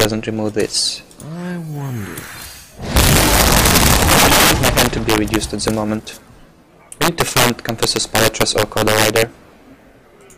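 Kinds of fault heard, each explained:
Integer overflow: heard at 0.00 to 0.05 s, 2.96 to 5.68 s and 7.02 to 9.22 s, where the signal was driven about 4 dB, 13 dB and 11 dB past the integer limit. Instead of being held at the maximum, each sample that exceeds it wraps around to the opposite extreme, so peaks flip across the full range. The result is cracking and tearing on the loud parts that is sharper than clipping, most evident in the two longer stretches.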